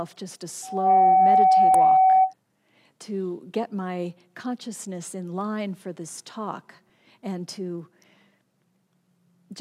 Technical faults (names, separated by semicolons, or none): loudspeaker feedback squeal; damaged data in a compressed stream